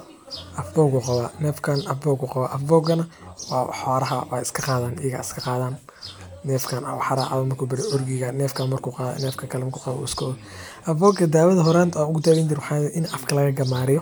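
No audible technical faults.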